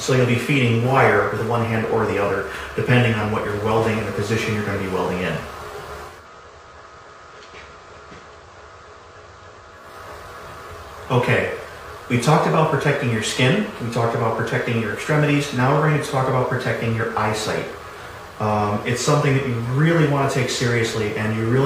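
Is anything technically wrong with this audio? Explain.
Yes. From 6.02 to 9.97 s the digital radio blends to analogue: the digital stream failed and the receiver cross-faded over 269 ms to the station's FM broadcast, then back. Hiss comes up, and the level drops about 6 dB, so the waveform visibly shrinks.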